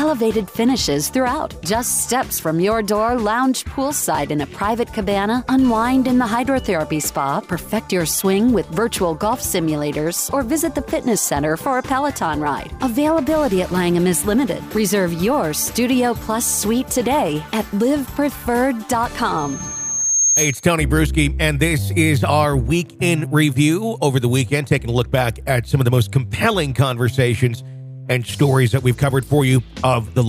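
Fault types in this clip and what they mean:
loudspeaker feedback squeal: a 6.4 kHz tone swells over roughly a second to about 5 dB above the sound, 19.37 to 20.72 s. Unlike a steady interference whine, it builds by itself.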